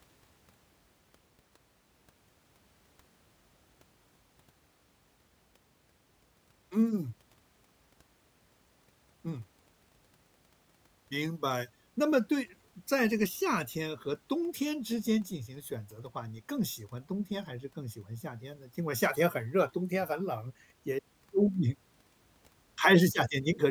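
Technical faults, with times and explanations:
No technical faults can be heard.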